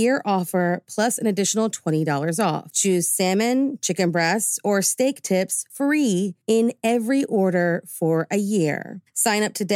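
No technical faults are audible.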